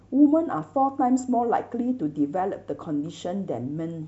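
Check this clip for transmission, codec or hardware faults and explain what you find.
Nothing to flag here: a listen through this bit of speech turns up no faults worth pointing out.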